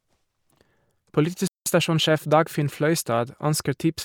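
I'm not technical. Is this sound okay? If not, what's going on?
No. There is a playback stall at 1.47 s: the speech cuts to silence for about 0.19 s, until 1.66 s. The likely cause is that the player ran short of data or was briefly held up, so it had nothing to play.

Right after, from 1.66 to 2.40 s, comes time-compressed catch-up. The player works through its backlog by trimming tiny pieces and blending the joins, so the speech runs about 1.25 times faster while keeping its normal pitch.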